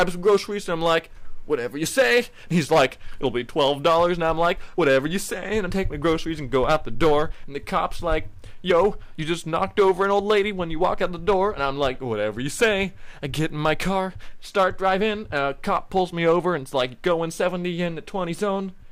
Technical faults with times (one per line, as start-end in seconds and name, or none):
0.00-18.91 hard clipping